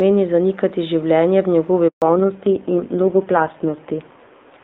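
At 1.88 s a handover gap cuts the speech for 140 ms, until 2.02 s. While the call switches networks no frames arrive, so the voice dies away almost instantly. The waveform drops to a flat line and the spectrogram shows a clean vertical blank band.

From 2.02 s to the end, a fallback to narrowband leaves nothing above 4 kHz. The voice turns dull and rough, which fits a drop from HD Voice at about 23.85 kbit/s to narrowband AMR near 5.9 kbit/s. The spectrogram shows a hard ceiling at 4 kHz where upper energy previously reached about 7 kHz.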